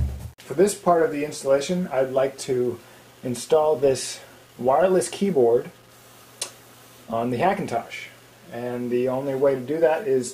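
The audio carries grainy distortion from start to finish, across the whole clip of about 10 seconds. The likely cause is low bit depth without dither. The error sits about 35 dB below the signal, which fits an 8-bit word. Each sample was rounded to the nearest step with no dither added. So the error tracks the signal rather than forming a neutral noise floor. Quiet passages turn grainy. Anything smaller than one step either vanishes or flickers between two levels.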